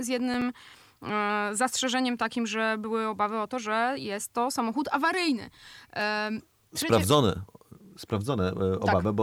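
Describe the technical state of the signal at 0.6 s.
At 0.6 s the processor is overloaded, missing around twenty tiny buffers of roughly 1.5 ms each between 0.34 and 0.87 s. Each miss leaves a hard-edged gap of silence, heard as gritty processor overload crackle that ends just before "e zastrzeżeniem takim że".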